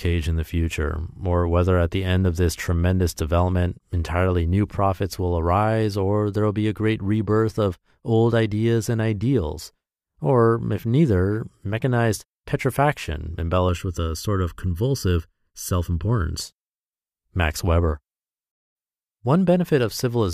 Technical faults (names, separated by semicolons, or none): channel delay (comb filtering)